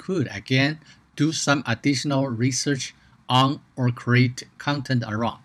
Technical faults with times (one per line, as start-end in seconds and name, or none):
none